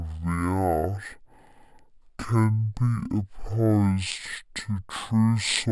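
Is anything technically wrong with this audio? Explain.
Yes. Throughout, it's stereo read as mono: left and right samples get played back to back as one channel, so the speech runs at half speed and drops a full octave.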